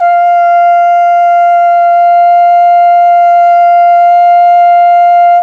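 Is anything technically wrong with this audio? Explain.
No, nothing in this music stood out as a technical problem on listening.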